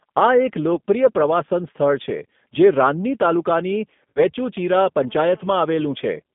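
From start to finish the speech carries G.729 codec damage: an 8 kbit/s model-based coder rebuilding each frame from a filter and sparse pulses, so it sounds rough and slightly synthetic. A spectrogram shows energy confined to roughly 150 Hz to 3.6 kHz, with nothing above.

At 0.75 s and again at 4.10 s, VoIP packet loss concealed by the speech codec appears. The decoder bridges about 20 ms, then about 60 ms (consistent with one and then three lost packets), by repeating its last pitch and filter. The gaps sound like a brief buzzy tone or coloured noise that fades, and the voice stays weak until 0.80 s and 4.23 s. On a waveform the amplitude sags. A spectrogram shows smeared, repetitive harmonics there.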